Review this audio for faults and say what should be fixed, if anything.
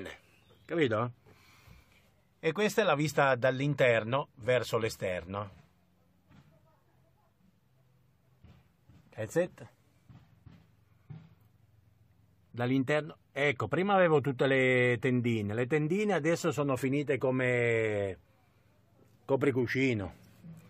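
No faults; nothing needs fixing.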